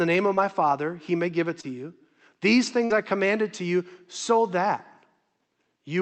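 Short concealed packet loss at 0.35–0.39 s, just after "name of", and again at 1.61–1.65 s, after "he may give it": about 20 ms of speech failed to arrive in time, and the decoder extended the preceding sound across each gap, leaving a brief smear. A burst of packet loss at 2.85–2.92 s, just before "I commanded to you", drops about 60 ms; the receiver stretches the last sound and turns it down before the speech resumes with that stretch missing.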